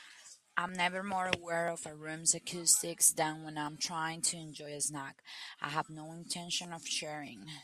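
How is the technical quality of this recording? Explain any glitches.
The recording has one recurring glitch: audio missing between chunks, at 0.69, 1.68, 2.67, 3.67, 4.66, 5.65 and 6.65 s. At each point a few milliseconds of speech vanish and the two sides butt together with no gap, giving a tiny skip or tick. This is likely a recorder handling audio in one-second blocks and dropping a sliver at each handover. The strict once-a-second spacing distinguishes it from random network dropouts, which fall irregularly.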